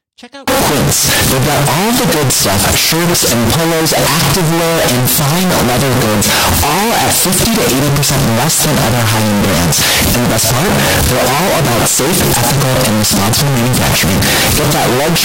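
From 0.48 s to the end, harsh, very loud distortion swamps the speech, with pauses as loud as talk. This is likely signed and unsigned mixed up in 16-bit samples, so each zero crossing jumps across the range.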